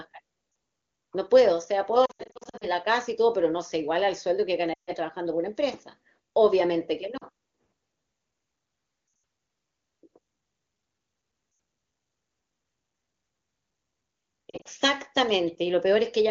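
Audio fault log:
0.51–0.55, 2.05–2.67, 4.74–4.91, 7.17–7.24, 9.07–9.23, 11.51–11.59 and 14.49–14.68 s, lost AMR speech frames: the wideband decoder, clean between events, replays the last pitch and vocal-tract settings at falling gain. Each gap sounds smeared and fades to near silence within two frames, not hard-cut to silence, and the 2.05 s stretch is broken up rather than continuous.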